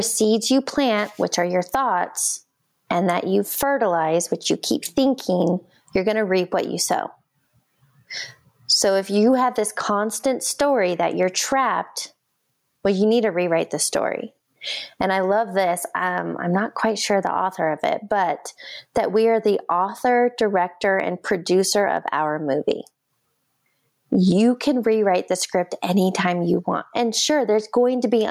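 Gain pumping runs through the whole recording, with the level swinging by roughly 25 dB. The likely cause is an input gain set far too high, with a fast limiter clamping every peak and squashing the speech.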